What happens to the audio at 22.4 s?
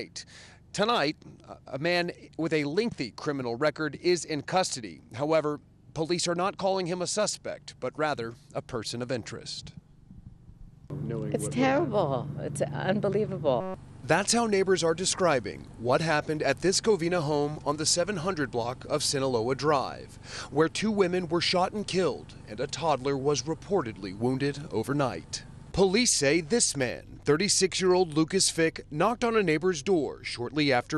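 Nothing goes wrong at 22.4 s; the audio plays through that moment intact, with no dropout, click, distortion or other fault.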